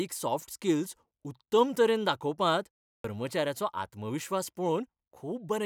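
At 2.98 s the speech resumes after a pause of about 0.35 s, but its first 63 ms, up to 3.04 s, are missing: a clipped start after a pause. The output device dropped into an idle state during the silence and needed time to wake and lock again, so the opening sounds were swallowed and the speech starts abruptly. Muted pauses would only silence the gap. Here the gap itself is intact and it is the speech after it that loses its onset.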